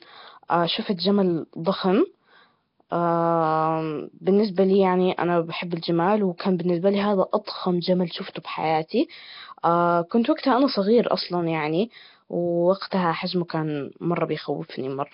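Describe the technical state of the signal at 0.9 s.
At 0.9 s the speech has a rough, hissy haze around it and a smeared, underwater blur, with nothing above 5.3 kHz. The damage is heavy and runs through the whole clip. The likely cause is Nellymoser compression, Flash's old microphone codec, at a rate that fits about 22 kbps. It codes short blocks with very few bits, so weak bands get none and are filled with noise, which produces that grainy halo and dulled top end.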